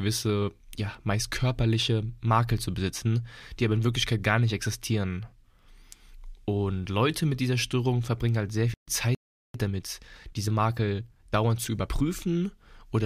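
At 8.74 s the speech drops out in a stream reconnect. The connection broke, the player went quiet for about 101 ms, then came back with a fresh decoder picking up mid-stream. By 8.88 s the audio is running again, but it resumes a little past where it left off, roughly 70 ms on, so there's a tiny jump in the flow. The first moment back comes in softened as the new decoder settles.

Not long after, at 9.15 s, there's a playback stall. The speech just stops mid-flow and sits in silence for about 394 ms, until 9.54 s. It sounds like the player likely ran dry of data or had its thread held up and couldn't feed the output. When the sound returns it carries on rather than skipping ahead, which means a backlog of audio has built up behind it.

That backlog explains what comes straight after: a time-compressed catch-up from 9.54 s to 12.16 s. To get back to where it should be, the player trims tiny slices out of the audio and cross-fades the joins, running at about 1.15x speed. 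The speech sounds noticeably rushed, yet the pitch stays where it should.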